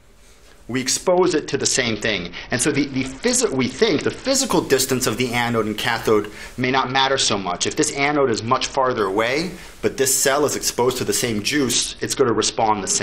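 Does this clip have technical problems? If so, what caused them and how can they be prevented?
Yes. A Bluetooth SBC bit pool drop occurs three times: 1.07 to 4.33 s, 6.62 to 9.00 s, and 11.72 s to the end. Each time the treble dulls and gritty noise rises. This fits a congested link forcing the bit pool from 31 to 7, near 61 kbps. The top sub-bands then get few bits, and the rest are coarsely quantised. Keeping the phone close and reducing 2.4 GHz interference keeps the link clear and prevents it.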